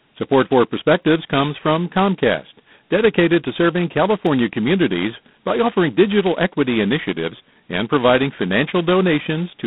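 From the start the speech has that harsh, rasping hiss riding on it that gets louder and softer with the voice. That's G.726 ADPCM at heavy damage, which fits the 16 kbit/s mode: only a couple of bits per sample describe the prediction error, so the noise is coarse. The band runs roughly 150 Hz to 3.7 kHz, with nothing above 4 kHz.

At 4.27 s there's a single sharp click, a thin vertical line in the spectrum. It's likely dropped samples: a handful went missing, around a tenth of a millisecond, so the waveform jumps straight to a later value.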